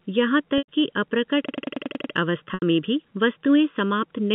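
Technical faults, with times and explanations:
Throughout, channel delay (comb filtering): a hollow, phasey tone with regular spectral notches from roughly 700 Hz upward, as one channel lags the other by under a millisecond before mono summing.
0.58 s and 2.54 s, packet loss with pitch repetition: a brief held buzz, then a fade, as lost packets (about 100 ms and 80 ms) are bridged by repeating the last pitch period, with speech resuming on "में भी वस्तुएं" after the second.
1.49 to 2.14 s, system hang loop: a machine-gun stutter at 10.8 Hz, one 92.88 ms piece repeated seven times while the hardware cycled a frozen ring buffer, which fits a 4096-sample buffer.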